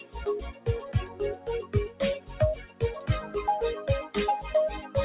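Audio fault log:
Throughout, noise suppressor applied to music or sounds: a speech-tuned suppressor mistakes steady and fading content for noise, swinging the level by roughly 15 dB, so the sound pumps and thins.
0.52–0.67 s, 1.06–2.01 s, 2.19–2.40 s, 2.65–2.81 s, sound cut by the noise suppressor: sustained or decaying sound is classed as noise and pulled down by about 12 to 13 dB, so it sinks.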